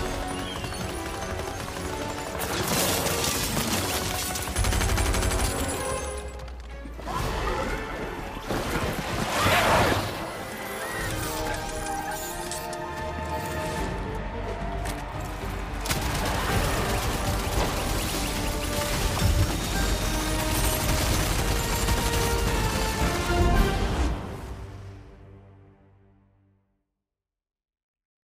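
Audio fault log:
24.22 s dropped samples: the stream likely skipped a tiny fraction of a millisecond of samples, so the waveform leaps straight from one value to a later one. The gap is far too brief to remove any sound, and the jump is heard as a single sharp click.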